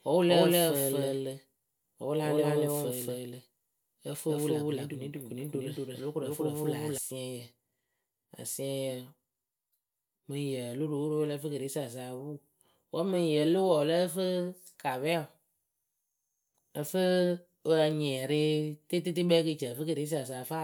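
From the start of the clip to 6.98 s the speech is a doubled audio track: a full-band copy at roughly equal level trails about a fifth of a second behind, with no reverberant tail, then drops out abruptly. A second, slower capture path is the likely cause.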